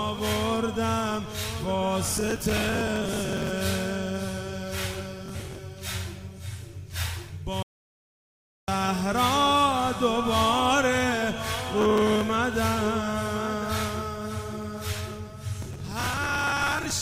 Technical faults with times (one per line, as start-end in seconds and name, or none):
2.05-3.49 processor overload crackle
5.26-5.58 processor overload crackle
7.62-8.68 playback stall
11.81-12.21 processor overload crackle
15.62-16.90 processor overload crackle